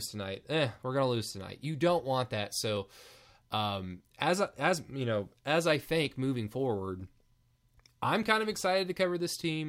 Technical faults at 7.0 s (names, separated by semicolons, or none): dropped samples